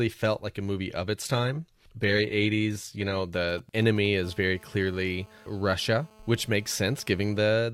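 Just after "movie of", from 1.22 to 3.22 s, the adaptive stream drops to a lower bitrate. The treble turns thin and synthetic, which fits a switch from 96 kbit/s AAC to 20 kbit/s HE-AAC.

From 3.34 to 4.07 s come GSM signalling bursts. A nearby 2G phone's radio pulses are rectified into galloping ticks and short 217 Hz buzzes, roughly 20 dB below the speech.

From 4.24 to 7.48 s, a steady GSM phone buzz sits under the speech. The phone's 217 Hz call bursts become a hard, raspy, harmonic-rich drone, about 28 dB down.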